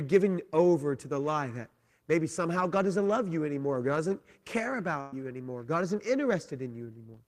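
Right after "doesn't care", at 5.00 to 5.13 s, there's a burst of packet loss: about 120 ms of audio is missing, concealed by stretching the last sound and fading it, before "you anymore" resumes.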